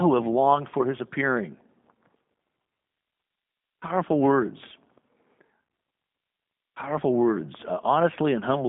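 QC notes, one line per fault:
Throughout: G.729 codec. The speech has that rough, slightly synthetic VoIP character, and it's plainly audible. It fits an 8 kbit/s G.729A coder rebuilding each 10 ms frame from a vocal tract filter, a pitch guess and a handful of pulses rather than the real waveform. The band sits at about 150 Hz to 3.6 kHz with nothing above 3.7 kHz, so the top end is gone and everything sounds boxed in, like a phone line.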